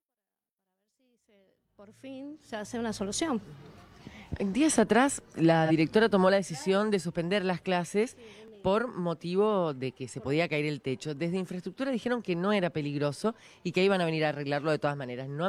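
The level rises smoothly from silence over the first 3 s. At 3.47 s there is a click. It is an overlapping chunks fault. Each processing chunk began before the previous one finished, so about 6.5 ms of audio plays twice at the join. The same stutter returns at 8.48 s and 13.49 s. That steady 5 s spacing matches the chunk length.

From 5.65 to 5.71 s there is a brief smeared, noisy patch. This is AAC frame loss with concealment. About 43 ms of audio went missing, which fits a single lost AAC frame. The decoder rebuilt the gap from the last good spectrum. That guess has the right rough energy but the wrong fine detail, so it sounds grainy and phasey. The gap is too short for any fade toward silence.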